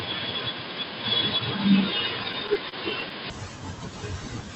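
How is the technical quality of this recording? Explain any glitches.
The recording has two clear problems, both in the first 3.3 seconds.

From 0.0 to 3.3 s, the speech is dull and boxy. A faint new noise floor sits well below the speech. There is no gap and no obvious level jump. This is likely an input switched to a poorer device, such as a headset's call profile, which passes a narrower band.

From 2.23 to 3.12 s, there is a repeated stall, or stutter. Eight short hitches drag the speech, the longest about 27 ms. Packets arrived late and the jitter buffer ran dry. The receiver stretched the last sound to fill about 88 ms in total, so nothing is lost.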